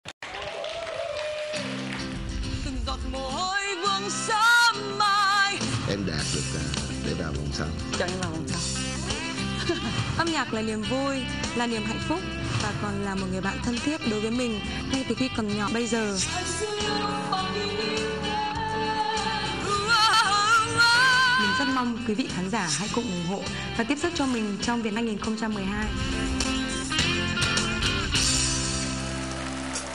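Brief glitches at 15.68, 20.13 and 24.96 s are damaged data in a compressed stream: corrupted frames make the decoder lose sync until it finds the next frame header.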